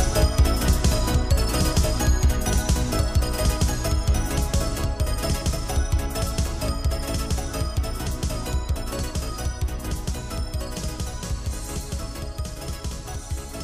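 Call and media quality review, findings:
Doubled audio track, present throughout. Full-band second copy trails the original by roughly 1.5 s, about 5 dB quieter, with no decay or room colouring. Likely cause: the signal captured twice, once through a slower capture or monitoring path, or two misaligned copies held in the edit. The fixed offset and clean, undamped copy rule out acoustic echo.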